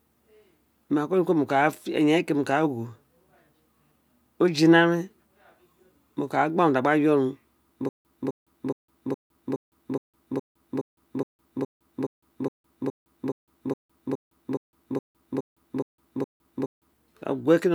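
From 7.89 s to 16.93 s the speech breaks into a stutter with silent gaps. A fragment about 258 ms long plays, then roughly 159 ms of silence follows, and the same fragment returns. This repeats 21 times on a steady 418 ms cycle, giving a rhythmic chop. The likely cause is a stalled player or stream that replays its last buffered piece at each retry before running dry. Whatever speech belonged to that stretch is missing.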